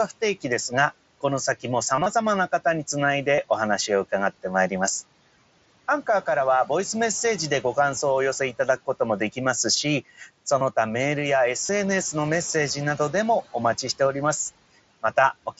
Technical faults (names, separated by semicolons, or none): concealed Bluetooth headset packet loss; speech cut by the noise suppressor